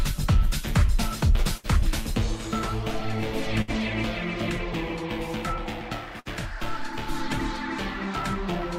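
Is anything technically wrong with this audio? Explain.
Yes. There are three bursts of packet loss: 1.57 to 1.67 s, 3.62 to 3.71 s, and 6.20 to 6.28 s. Each time, the receiver extends the last sound for roughly 60 ms and fades it down. The audio then resumes with 60 ms missing.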